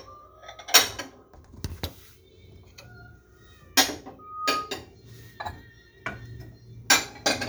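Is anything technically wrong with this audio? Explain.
Yes. Loudspeaker feedback squeal occurs from 4.19 to 4.83 s. The microphone picks up its own loudspeaker, and at 1.2 kHz the loop gain exceeds one, so that tone reinforces itself. It swells over roughly a third of a second into a whistle about 5 dB above the surrounding audio.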